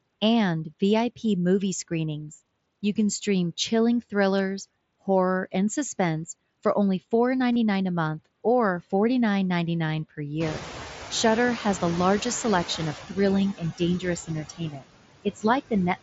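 Noise suppressor artifacts run through the whole clip, holding steady background down by about 19 dB. The suppressor estimates the noise floor band by band, frame by frame, and subtracts it, so the background sinks in pauses and comes back underneath the speech. All of this is heard through the band-limited, lightly grainy sound of the mSBC headset link.

Concealed Bluetooth headset packet loss appears twice. At 4.38 s a gap of 15 ms, consistent with roughly two lost frames, is filled in. At 7.53–7.56 s a 30 ms gap, pointing to about four lost frames, follows. In both places the receiver patched over missing audio by repeating the best-matching stretch of the preceding waveform, which gives a short buzzy, held tone at full level and a small warble as real audio resumes.

Noise suppressor catching up follows from 10.4 to 12.97 s. Around 10.5 s the room noise jumps by about 19 dB and then sits about 12 dB under the speech. 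The suppressor's noise estimate trails that jump, so at first only about 8 dB is removed and the louder background comes through. Over about 2.6 seconds the estimate adapts and the noise gradually sinks back toward its earlier suppressed level.

Speech cut by the noise suppressor occurs at 13.54–13.81 s and again at 14.27–14.87 s. With the background now loud, the suppressor mistakes low-level parts of the speech for noise and turns them down along with it, by up to about 14 dB in the first spot and about 22 dB in the second. Around a tenth of a second, then roughly a third of a second, of the speech sounds swallowed and faint.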